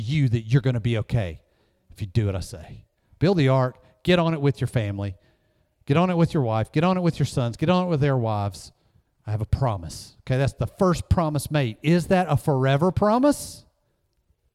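No technical faults are audible.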